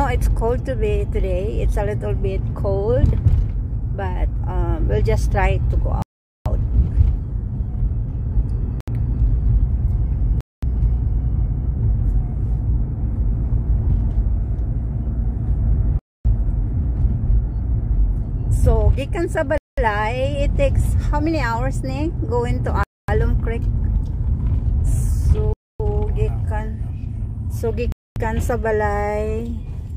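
The sound cuts to dead silence at 6.02 s for 0.43 s, then at 8.81, 10.41, 15.99, 19.58, 22.84, 25.53 and 27.92 s, for 0.07 to 0.27 s. These are likely Bluetooth stalls, a starved headphone buffer. Unlike a clean edit, the sound resumes where it stopped or slightly later.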